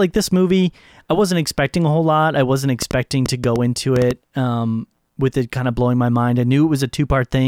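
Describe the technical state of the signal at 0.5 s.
At 0.5 s the speech signal is intact, with no audible technical fault at that moment.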